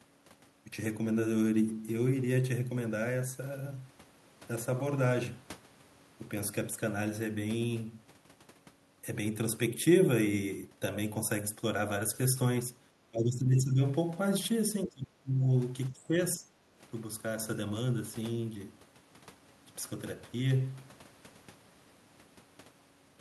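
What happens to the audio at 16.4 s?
From 16.37 to 16.45 s the speech level briefly dips, by about 5 dB at its deepest, for well under a tenth of a second. This is likely speech suppressed in double talk: an echo canceller, unable to separate the near talker from loudspeaker echo, turned both down.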